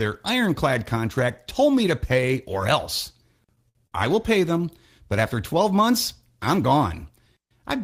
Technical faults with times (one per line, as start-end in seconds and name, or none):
3.69-3.95 short stall from a late packet